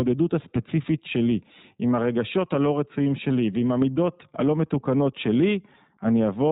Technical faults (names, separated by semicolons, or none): iLBC codec